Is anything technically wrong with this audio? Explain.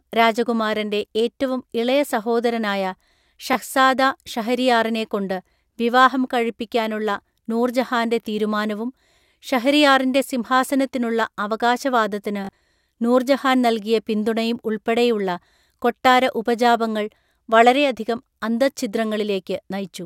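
Yes. Bluetooth stutter occurs at 3.53 to 3.55 s, a single repeated 20 ms slice, and again from 12.45 to 12.61 s, where about 100 ms is lost in short repeats spread over 160 ms, the longest near 40 ms. When packets arrive late or are lost, the receiver replays its last buffer. Unlike a dropout's silence, this buzzes, and the speech then resumes further on, as though it had kept playing.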